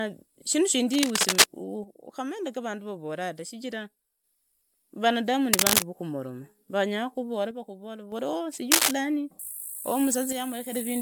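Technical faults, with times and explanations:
Throughout: generation loss. The speech sounds swirly, hollow and smeared, with blurred attacks and nothing above 20.1 kHz, likely from repeated MP3 re-encoding, fitting about four passes at 128 kbit/s.
0.93–1.46 s, 5.53–5.82 s (just before "vokomoroma vanyakuvora"), 8.71–8.93 s: cable scratch noise. Dense, uneven scratchy bursts about 5 dB above the speech, likely from a worn contact whose resistance flickers as it moves.
1.84–4.24 s, 7.51–8.12 s (just after "vokomoroma vanyakuvora"), 10.32–10.72 s: one channel drops out. Level falls abruptly by 6 dB, likely because one stereo side vanishes, halving what both channels shared.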